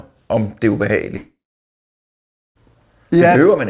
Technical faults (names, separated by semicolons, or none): long network dropout